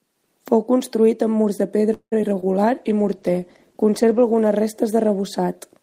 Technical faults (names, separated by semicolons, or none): call audio freeze; short concealed packet loss; call bitrate drop